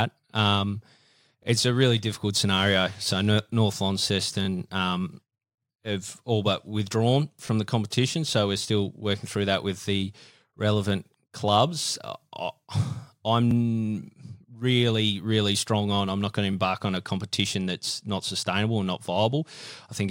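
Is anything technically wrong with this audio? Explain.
Yes. There are overlapping chunks at 1.43–1.45 s, 13.51–13.53 s and 16.53–16.55 s in this speech. Each chunk starts 20 ms early, so that slice plays twice. This causes a brief click or stutter at the joins.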